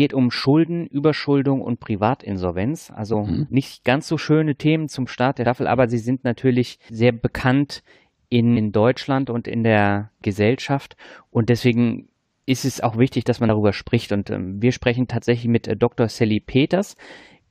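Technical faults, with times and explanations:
3.12–3.15 s, 5.45 s, 8.56–8.58 s and 13.48 s: damaged data in a compressed stream. Each is a brief chirp or blip, heard just before "mhm nicht ganz so", just before "aber sie sind natürlich", and right after "auch wichtig dass man". Corrupted bytes make the decoder misread frames and lose sync until it finds the next header. On a spectrogram each shows as a thin vertical smear of broadband energy, and on the waveform as a short discontinuity.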